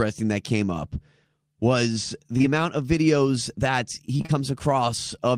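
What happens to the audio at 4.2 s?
Short concealed packet loss hits just after "amount of videos that," in three overlapping gaps spanning 4.17–4.40 s: 20 ms chunks never arrived, so the receiver extended the preceding sound and blended back, leaving a brief smeared wobble.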